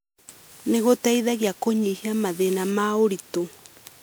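A speech clip with generation loss running from start to finish. The sound is swirly and hollow, with a smeared quality that seems too heavy for its bandwidth. Consonant attacks blur rather than snap. Nothing is present above about 20.8 kHz. The likely cause is repeated lossy coding, with the audio decoded and re-encoded as MP3 about four times at 128 kbit/s. Each pass quantises on a shifted frame grid, so noise and spectral holes accumulate.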